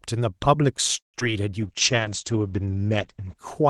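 Speech carried over an Opus call path shows four distinct transport faults. From 0.97 to 1.16 s there is a call audio freeze: the last sound is stretched into a fading tail and then about 140 ms of silence, inserting roughly 164 ms of delay with nothing lost, most likely because packets stalled in transit and the jitter buffer ran dry. Just after, at 1.20 to 1.22 s, a short concealed packet loss removes about 40 ms of audio. The decoder covers it with only a few milliseconds of synthesised continuation, so a brief smear or wobble replaces the missing fragment, and the playout catches back up by a few hundredths of a second. From 1.61 s to the end, a call bitrate drop takes the encoder from 40 kbps to 10 kbps, holding the lowest rate for about 1.4 s. Audio bandwidth shrinks from 12 kHz to 8 kHz, so the speech turns muffled and coarse, with a watery texture. Overlapping this, a jitter buffer slow-down between 1.67 and 2.33 s repeats pitch periods to rebuild its reserve, adding 47 ms and playing at 94% speed with unchanged pitch. 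The result is slightly drawn-out syllables.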